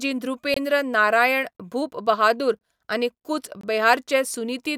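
Speech with a gap between chunks: four hard-edged holes of about 23 ms at 0.54, 1.57, 2.59 and 3.61 s, one per 1-second chunk. Unlike a dropout, nothing is missing; the speech resumes exactly where it stopped, just delayed by the silence.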